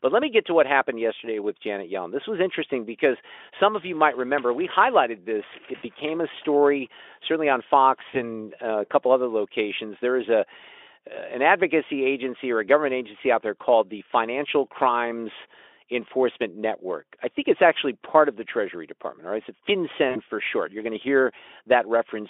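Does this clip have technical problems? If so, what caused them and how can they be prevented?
Yes. VoIP packet loss concealed by the speech codec occurs at 5.77–5.88 s (after "remember we highlighted this"), 8.09–8.24 s (after "a story certainly on") and 20.09–20.20 s (after "or is it"). Gaps of about 40, 40 and 60 ms were filled by the decoder extending its last pitch and filter at falling gain. This produces a stretched buzzy tone or coloured noise that fades, heard through the narrowband Speex line. On a spectrogram it shows as frozen, smeared harmonics that fade, and on a waveform as repeated, decaying cycles. Prevention: use a wired or less congested network, prioritise voice packets with QoS, and enable forward error correction or a larger jitter buffer.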